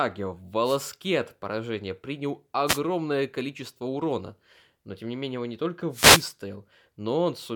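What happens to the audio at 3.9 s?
Nothing goes wrong at 3.9 s; the audio passes straight through that point with no dropout, click, distortion or other fault.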